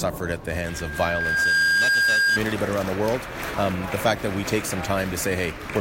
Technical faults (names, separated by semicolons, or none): loudspeaker feedback squeal